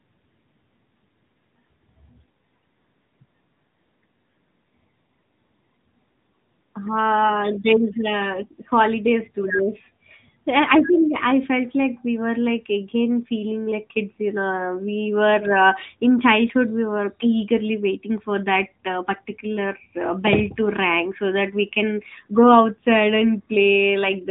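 AMR narrowband mobile codec damage runs throughout the clip. The speech has been squeezed through a phone-network coder that rebuilds each 20 ms frame from a vocal-tract model driven by a few pulses, so nothing survives above 3.8 kHz and the voice sounds boxed in and dull. The plainly audible buzzy, synthetic edge on the speech points to a mid-rate mode, fitting roughly 10.2 kbps.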